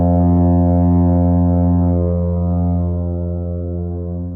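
From the first moment, every event in the clip is heard twice: a second, equally loud copy trails the original by roughly 150 ms, giving a hard slapback with no decay or room colour and the full frequency range intact. That is a doubled audio track, most likely the same signal reaching the mix a second time along a slower path, or two copies held out of step in an edit, so they sit a fixed distance apart.

At 1.15 s the quality falls off suddenly, with no gap, and stays degraded to the end. The treble turns synthetic, and coding artefacts become audible on both the original and its echo. That is an adaptive stream at a lower bitrate: the player switched to a cheaper version when the connection slowed. The sound points to a move from a full-rate AAC stream down to a low-rate HE-AAC version near 20 kbit/s, which rebuilds the upper band rather than coding it.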